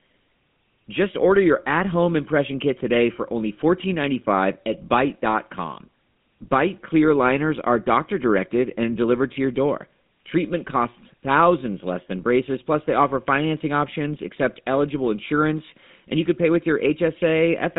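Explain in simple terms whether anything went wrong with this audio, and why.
Buzzy, gravelly speech from start to finish, with nothing above 3.8 kHz, points to the GSM full-rate codec rebuilding the voice from regularly spaced pulses.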